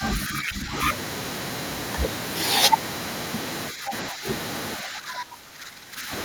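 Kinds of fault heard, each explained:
Speech suppressed in double talk: the speech sinks by roughly 10 dB at 0 to 0.72, 3.71 to 3.93 and 4.1 to 4.26 s, and about 15 dB from 4.77 to 6.11 s, likely from echo-canceller ducking. Unlike packet-loss gaps, it dips rather than vanishing.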